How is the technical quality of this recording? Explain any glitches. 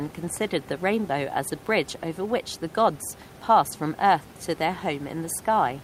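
No glitches to report: the speech sits over room noise about 23 dB down, which belongs to the recording space rather than the signal chain.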